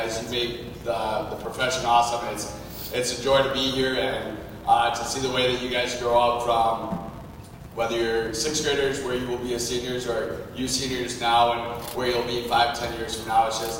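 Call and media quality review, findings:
Filter restarted on every block: filter state reset at each 5 ms block boundary, so each block starts with a transient. Result is a steady 200 Hz buzz throughout, tracking signal level.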